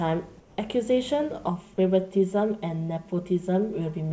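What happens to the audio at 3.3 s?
The speech sounds hollow and phasey from 1.49 s to the end. This is channel delay (comb filtering): one channel lags about 5 ms, notching evenly spaced bands from roughly 100 Hz.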